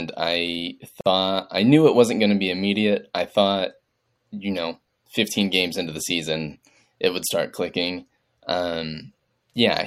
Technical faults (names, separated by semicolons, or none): gap at a join of encoded pieces